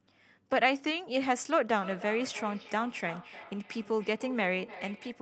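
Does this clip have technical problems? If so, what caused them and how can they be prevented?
Yes. A second device on the same call was playing this microphone's signal back into the room, and the microphone picked it up again, causing feedback echo between two devices. From 1.69 s to the end, the sound returns roughly every 300 ms, thinner and more ringing, at about 15 dB below the speech. To prevent it, mute the speaker and microphone on every device but one when several join from the same room.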